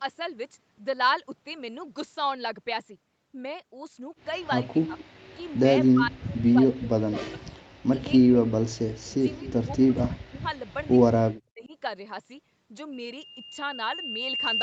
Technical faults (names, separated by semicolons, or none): speech suppressed in double talk; echo leak; loudspeaker feedback squeal